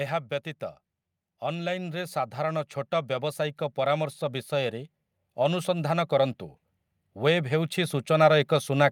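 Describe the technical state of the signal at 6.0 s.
At 6.0 s, automatic gain rising is underway, from 1.48 to 6.41 s. The gain control lifts a quiet input by about 8 dB, swelling speech and background together.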